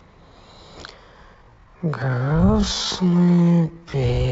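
At 1.32 s the speech abruptly slows and stays slow to the end of the clip. This is a time-stretched section. The pace drops to about 0.57 times normal, yet the pitch does not fall. That points to processing that likely lengthened the audio to fill a set duration, repeating short slices to preserve pitch. The slowed part drags.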